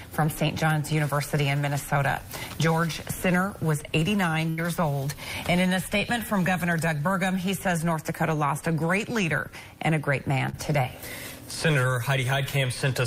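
The audio has two network dropouts, both covered over by the receiver's loss concealment. At 4.49 to 4.60 s there is a burst of packet loss: about 80 ms of audio failed to arrive in time, and the decoder bridged the hole by extending the last received sound while ramping it down. This gives a held buzz or fading hiss in place of the real signal. When playback resumes, roughly 80 ms of material is simply gone, so the sound jumps forward rather than picking up where it left off. At 10.50 to 10.55 s there is a short concealed packet loss of about 40 ms. Here the synthesized fill, built from the preceding sound's pitch or noise character, blends back into the incoming audio. It is heard as a brief smear or wobble.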